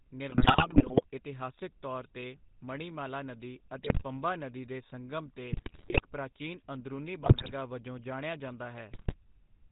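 From start to finish the speech carries plainly audible GSM full-rate codec damage: a buzzy, gravelly roughness from the pulse-driven vocal-tract model and a hard ceiling at 4 kHz. The character points to the 13 kbps GSM full-rate coder.

GSM bit errors break in at 0.30–1.04 s, ending just before "ਇਤਿਹਾਸਕ ਤੌਰ 'ਤੇ ਮਣੀਮਾਲਾ", then at 3.83–4.03 s, at 5.52–6.02 s between "ਨਦੀ ਦੇ ਸੰਗਮ' ਤੇ" and "ਪ੍ਰਾਚੀਨ ਅੰਦਰੂਨੀ", at 7.22–7.53 s, and at 8.92–9.14 s after "ਵਜੋਂ ਜਾਣਿਆ ਜਾਂਦਾ". Corrupted filter, pitch and gain values warp the spectrum and level frame by frame, producing squawks, pops and gargling that fit an error rate of roughly 4 to 6 percent.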